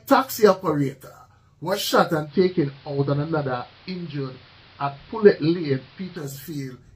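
At 2.23 s the sound dulls over about 104 ms as the treble drops away and a steady hiss, roughly 30 dB below the signal, rises underneath. The loudness holds steady. This persists until 6.26 s, when clarity returns just as quickly. It is digital radio blending to analogue: the receiver lost the digital stream, cross-faded to the station's narrowband AM broadcast, then faded back once digital reception recovered.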